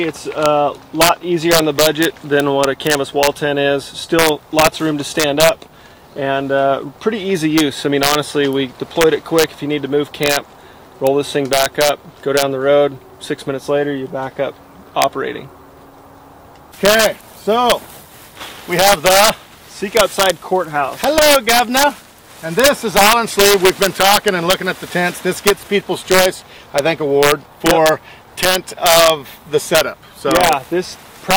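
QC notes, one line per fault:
Throughout: integer overflow. The signal is pushed about 3 dB past the integer ceiling, and a small fraction of samples on the loudest peaks wrap to the opposite sign instead of being limited, so each swings across the full range and lands as a harsh crack, far sharper than clipping.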